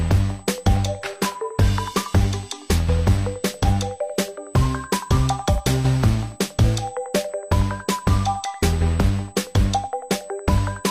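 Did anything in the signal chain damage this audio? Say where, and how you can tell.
Yes: USB whine on the analogue power or ground: the bus's 125 µs microframe current leaks in, leaving a fixed 8 kHz tone roughly 25 dB below the signal throughout.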